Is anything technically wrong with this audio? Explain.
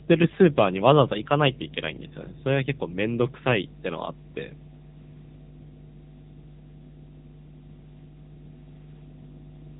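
Yes, two faults run through the whole of this speech recording.

Mains hum is present from start to finish: a steady low tone at 50 Hz, sitting only around 10 dB below the speech, so it is clearly audible under every phrase. It comes from the power line leaking into the signal, through a ground loop or a nearby transformer. It is a fixed pitch that never tracks the talker, and it has no high, rasping edge, which separates it from a buzz or from broadband hiss.

The AMR narrowband mobile codec has also shaped the whole clip. Nothing passes above 3.8 kHz, and the voice sounds buzzy and synthetic, with heavy damage consistent with one of AMR-NB's low bit-rate modes, around 6.7 kbps. The codec rebuilds speech from a vocal-tract model excited by a few pulses per short subframe, so at low rates the timbre turns artificial. A plain low-pass filter would dull the sound but leave it natural, while this codec makes it sound fake.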